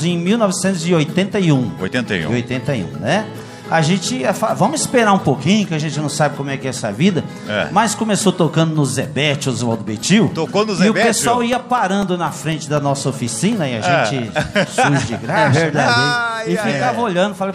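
From 9.78 s to 13.78 s the audio carries periodic USB or driver dropouts: every 0.25 s a tiny slice of signal, around a millisecond, goes missing and is replaced by silence. Something is stalling the USB link or audio driver on a fixed schedule, so the stream briefly starves each time. The result is a steady run of roughly fifteen small ticks at a four-per-second rate, audible only where sound is present.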